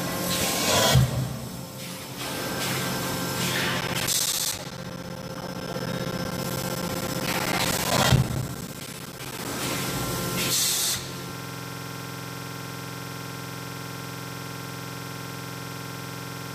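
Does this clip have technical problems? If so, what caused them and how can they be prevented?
Yes, there are two separate problems.

From 3.81 s to 9.45 s you get periodic USB or driver dropouts. Every 64 ms a chunk of roughly 10 ms is lost and replaced by silence, about a hundred gaps in all, so the sound picks up a regular ticking rhythm. Something in the background is stalling the USB bus or audio driver on a fixed schedule. To prevent it, track down the polling task or power-saving setting and give the audio device its own USB controller.

From 11.35 s to the end there's a system hang loop. A 46.44 ms slice of audio repeats about 110 times, giving a buzzy stutter at 21.5 Hz, which fits a 2048-sample buffer. The machine or driver froze while the interface kept replaying its ring buffer. To prevent it, update or replace the driver and check the system for whatever caused the freeze.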